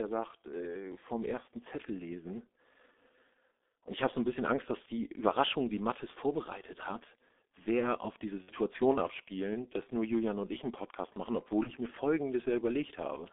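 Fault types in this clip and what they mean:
G.723.1 codec: A low-rate telephony speech coder runs through the whole clip. The band is confined to roughly 250 Hz to 3.6 kHz, and its heavy coding damage, consistent with about 6.3 kbit/s, makes the speech muffled and hoarse with smeared consonants. Unlike plain band-limiting, the roughness comes from the coder's slowly updated voice model, which tracks fast sound changes poorly across its 30 ms frames.
VoIP packet loss concealed by the speech codec: At 8.42 to 8.52 s and 11.63 to 11.72 s, audio went missing and the decoder filled in by extending its last pitch and filter settings, so the sound turns into a buzzy tone or coloured noise that fades rather than dropping out. The first gap, about 60 ms, fits two lost 30 ms frames, and the second, about 30 ms, fits one. Unlike a hard dropout or click, there is no silence, and the speech stays weak or distorted briefly afterwards.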